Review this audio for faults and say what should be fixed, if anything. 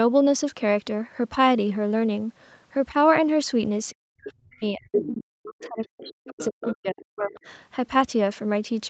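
Speech suppressed in double talk runs from 3.92 to 7.35 s. The talker's level keeps dropping, by about 40 dB at its deepest, most likely because the echo canceller turned everything down while both ends spoke. A headset, or a canceller tuned to keep the near-end voice during overlap, would prevent this.

The other side's voice leaking through shows up as short bursts at 4.22–4.31, 4.92–5.09, 5.6–5.67, 5.83–5.88, 6.04–6.48, 6.66–6.75 and 7.35–7.4 s. These are scraps of a second voice. Most sit well under the talker, but the one around 4.92–5.09 s is roughly as loud. It's likely loudspeaker echo the canceller didn't fully remove. Lowering speaker volume, using a headset, or giving the canceller a longer adaptation window should stop it.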